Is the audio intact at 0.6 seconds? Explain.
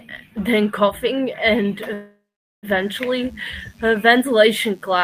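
Yes, the audio is intact at 0.6 seconds, with no fault audible at that moment.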